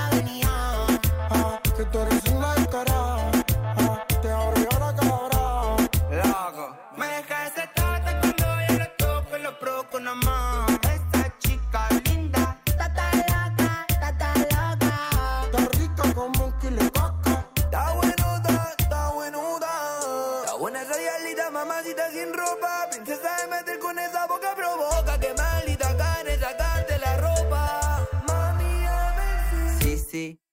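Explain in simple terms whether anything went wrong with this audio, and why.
Nothing went wrong here, so there's nothing to fix and no problem you'd need to listen out for.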